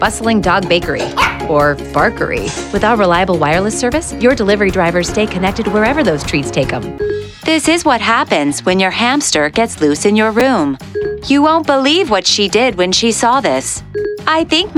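At 10.40 s, chunks out of order: one roughly 5.8 ms block was delivered one chunk late and played after its successor. Nothing is lost, but the swapped order leaves three hard joins, heard as a brief jumbled moment.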